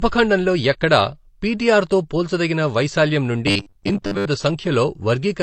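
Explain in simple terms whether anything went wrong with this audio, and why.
The whole recording sounds dull and smeared. This is likely transcoding between lossy codecs: it was compressed twice, and each pass added its own damage.

From 3.47 to 4.27 s, right after "పిటిఆర్ తో పోల్చదగిన వైశాల్యం", the voice turns into a stiff metallic buzz at 100 Hz. This is robotic sound from repeated short buffers, likely caused by audio arriving late, so the system looped 10 ms pieces and skipped about half of the real sound.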